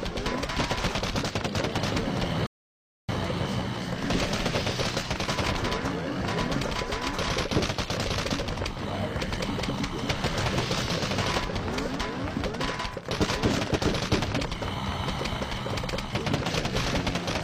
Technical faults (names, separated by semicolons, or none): rebuffering stall